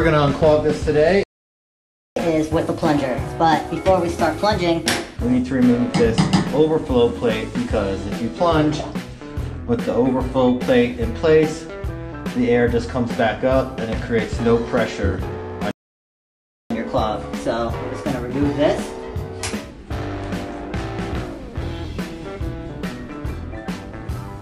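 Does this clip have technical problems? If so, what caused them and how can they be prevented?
Yes. Playback stalls at 1.23 to 2.16 s and 15.71 to 16.71 s silence the audio for about 0.93 s and 0.99 s, likely because the player's buffer ran dry or its thread blocked. Unlike a dropout, the sound resumes rather than losing a chunk. A deeper playback buffer would prevent this.

Catch-up at higher speed follows each stall: 2.16 to 5.16 s at 1.25 times speed, about four semitones sharp, and 16.71 to 19.71 s at 1.15 times, about two semitones sharp. Tempo rises with the pitch and then settles back, which separates this from a plain pitch shift. Time-stretching without pitch change, or skipping ahead instead of speeding up, would avoid it.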